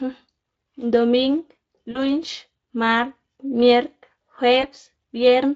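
Speech carried over a light Speex link shows VoIP packet loss concealed by the speech codec twice. At 1.91 to 1.99 s, about 40 ms goes missing, which fits two lost 20 ms frames. At 4.61 to 4.69 s, about 20 ms goes missing. The decoder stretches the last sound and fades it, leaving a brief buzzy or noisy smear.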